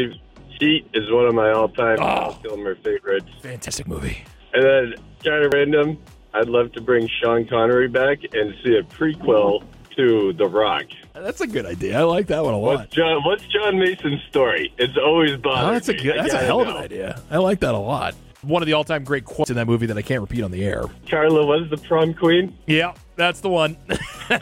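Likely dropped buffers (overrun), where samples were overwritten before being read, make the sound jump at 3.68, 5.52 and 19.44 s, skipping about 100, 70 and 100 ms.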